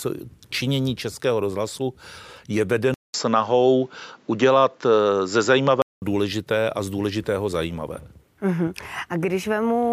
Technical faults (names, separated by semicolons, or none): input switched to a poorer device